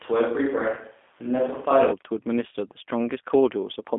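From start to finish the speech carries the mark of the G.729 codec. Everything sits in a narrow telephone band, roughly 250 Hz up to 3.5 kHz, so there's no air or sparkle on top and little body underneath. The coder rebuilds each 10 ms frame from a vocal tract filter, a pitch predictor and a handful of pulses. That leaves the voice plainly rough and a bit synthetic, the kind of texture that fits an 8 kbit/s stream.

Then at about 0.75 s to 0.81 s there's a short dropout handled by VoIP packet loss concealment in the speech codec. The gap points to a single lost 20 ms packet. With nothing arriving, the decoder carries on from its last pitch and filter settings and turns the gain down as it goes, so that moment smears into a brief stretched sound that fades. Because each frame leans on the one before, the voice stays weak and off for a short stretch after audio returns, which is why the glitch lasts longer than 20 ms.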